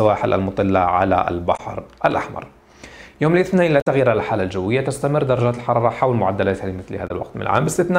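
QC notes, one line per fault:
1.56–1.60 s, 3.80–3.87 s, 7.07–7.11 s: damaged data in a compressed stream. Three brief glitches break the sound. Corrupted bytes make the decoder misread frames and lose sync. It garbles the audio until it locks onto the next valid frame header.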